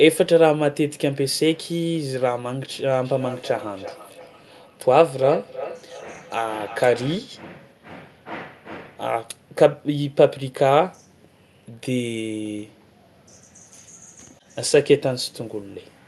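From 3.05 s to 7.23 s there's feedback echo between two devices: a second device in the room replays the call, the mic catches it again, and each phrase returns roughly every third of a second, thinner and ringier, peaking about 13 dB under the speech, over a call path capped near 12 kHz.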